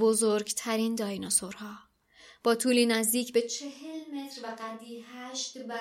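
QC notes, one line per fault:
3.42 s to end, switch to a distant microphone: speech abruptly turns hollow and roomy, about 10 dB quieter; likely the close mic was lost, not a plain gain drop.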